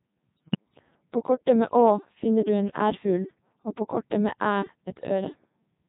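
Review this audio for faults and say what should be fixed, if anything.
The whole clip has been through the Codec 2 vocoder at 3.2 kbit/s, and the damage is heavy. Instead of carrying the waveform, the codec sends pitch, voicing, energy and a coarse spectral envelope, and the decoder rebuilds speech from sine waves. The result is buzzy and robotic throughout. On a spectrogram, harmonics appear as unnaturally clean, evenly spaced lines with smeared formants and little real noise between them. To prevent it, record or relay the speech through a higher-rate waveform codec instead of a low-rate vocoder.

From 0.37 to 0.56 s there are bit errors on digital voice radio, at a rate of roughly 7 percent. At such a low bitrate each flipped bit corrupts the pitch, level, voicing or spectrum of an entire frame. The voice lurches in pitch and loudness and breaks into a warbling bleep, which fits several consecutive corrupted frames. 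A spectrogram shows harmonic lines jumping abruptly from block to block, with sudden level steps in the waveform envelope. To prevent it, keep the link within solid coverage or add stronger error protection.

At 4.42 s there is a brief burst of hard clipping, with the signal overdriven by about 3 dB. Peaks exceeding the stage's maximum are sliced flat, and the squared-off tops generate harmonics well above the speech band. The result is a short crackle. In the waveform, the peaks sit pinned at a flat ceiling, and the spectrogram shows a thin vertical smear of energy reaching into the upper kHz range. To prevent it, lower the gain before that stage to leave more headroom.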